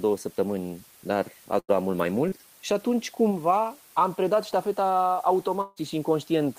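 Throughout the recording, the signal has been reduced to 7 bits, with dither added before rounding. That combination turns the coarse quantisation error into steady white noise rather than distortion, so the speech sits over a constant, even hiss only about 25 dB below it. The hiss never pumps or crackles with the level of the speech. It stays flat, which is the signature of dithered low bit depth.

At 1.59 to 1.70 s, a burst of packet loss removed about 100 ms of audio in a row. The receiver covered the hole by extending the last sound it had for about 90 ms and fading it down as the gap went on. What you hear is a short held, decaying sound where the speech should continue. Then the speech picks up again slightly further along, with that tenth of a second gone.

Between 2.28 and 2.48 s comes a short concealed packet loss. About 40 ms never reached the decoder in time. Concealment synthesised roughly 32 ms to bridge it, continuing the preceding sound and then blending back into the real signal. 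The repair stretches things by about 15 ms. It is heard as a brief smear or wobble in the speech rather than a clean cut.

At 5.61 to 5.78 s, about 160 ms of the speech is missing. In its place, the last sound is drawn out for roughly 152 ms as a fading tail, with no stretch of outright silence. Then the speech resumes further on. The length of the hole and the way it was filled point to a likely long network dropout, with the receiver's concealment carrying the sound across the entire gap instead of falling quiet.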